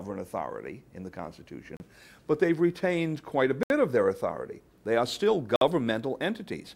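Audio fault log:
1.77–1.80 s, 3.63–3.70 s, 5.56–5.61 s: Bluetooth stalls. The sound drops to silence for 33, 69 and 53 ms, then resumes. Likely cause: interference delayed packets, so the headphones' buffer emptied and playback paused until resent data arrived.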